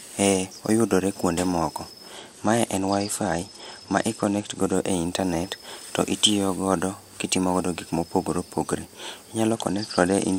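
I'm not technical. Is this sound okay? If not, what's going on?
No, not quite. From 2.13 to 4.74 s, between "oyudore kwonde moko" and "e internet to itiyo", and again from 9.50 s to the end, there's a Bluetooth SBC bit pool drop: the wireless link got squeezed, so the speech turns dull and gritty.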